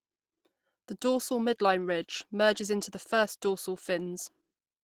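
Speech, and from 0.98 s to the end the quality drops suddenly with no gap while codec artefacts rise. This is an adaptive stream at a lower bitrate. The player switched to a cheaper version when the connection slowed, and the sound fits a step from around 64 kbit/s Opus down to about 16 kbit/s. On a spectrogram there is nothing above 20.4 kHz after 0.98 s, while the waveform continues unbroken.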